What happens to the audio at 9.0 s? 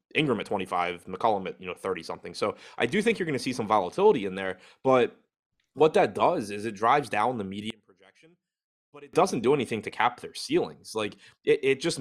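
At 9.0 s the speech nearly vanishes, dropping about 26 dB from 7.70 to 9.13 s, after "it drives down the". The likely cause is one channel inverted, so the centred voice cancels in mono.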